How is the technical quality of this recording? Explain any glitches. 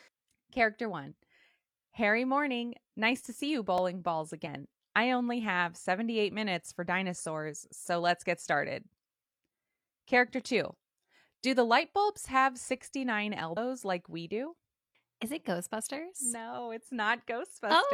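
The speech recording has three short glitches: one repeated buffer and two spots of damaged data in a compressed stream.

At 3.78 s, a tiny click-like stutter occurs. This is a repeated buffer: when fresh audio arrived late, the same 2.9 ms piece played twice more, which fits a 128-sample buffer.

From 4.42 to 4.48 s, and again from 13.52 to 13.57 s, brief disruptions break the sound. This is damaged data in a compressed stream: corrupted bytes made the decoder misread frames and lose sync until it found the next valid header.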